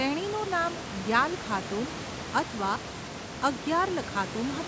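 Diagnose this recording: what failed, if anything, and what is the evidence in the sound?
Buffer stage fault: underrun with held sample, at 0.44 to 0.46 s and 2.76 to 2.78 s. Output holds flat for 20 ms, skipping roughly that much audio.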